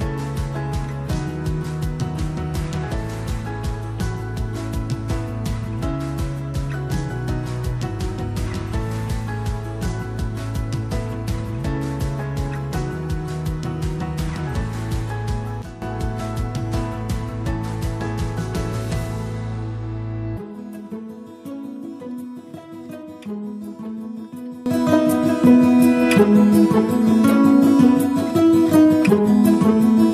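A sudden gain jump occurs twice: from 15.62 to 15.82 s the level drops by about 12 dB, and from 24.66 s to the end it rises by about 19 dB. In both places the sound and its background noise shift together instantly, with no fade. The likely cause is a digital gain setting applied from one sample to the next without a ramp, so the level steps rather than glides.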